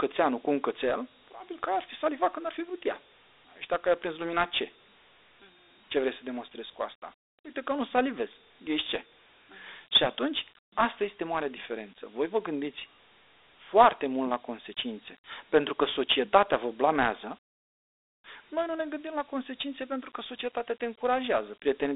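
From start to finish the speech carries Dialogic VOX ADPCM coding. The 4-bit steps leave a plainly audible gritty hiss riding on the voice, and the rate fits 8,000 samples a second at 32 kbps. The sound sits in a phone band of 300 Hz to 3.7 kHz, with nothing above 3.8 kHz.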